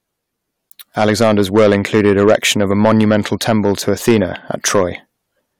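Speech with hard clipping running through the whole clip: the signal is driven about 7 dB past what the stage can pass, so the loudest peaks are sliced flat, and around two percent of the samples were cut off at the stage's limit. That gives a brittle crackle on peaks rather than the rounded, warmer thickening of soft saturation, because the abrupt flat tops throw harmonics high into the spectrum.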